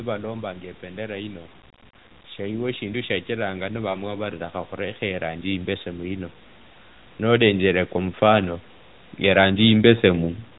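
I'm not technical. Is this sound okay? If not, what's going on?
No. Automatic gain rising happens twice, from 2.1 to 6.33 s and again from 7.04 to 10.31 s. The phone's automatic volume control decided the incoming sound was too quiet and slowly turned itself up. You hear the speech and the background noise grow louder together over several seconds, rather than a sudden jump. The first rise is the larger of the two.

Lost AMR speech frames cause a short gap from 3.90 to 3.97 s, lasting about 40 ms, which fits two lost frames. Radio errors spoiled that bit of the call, so the phone's speech decoder filled in by repeating the last good sound and letting it fade. You hear a brief dip or wobble before the speech returns, possibly a little weak or rough at first.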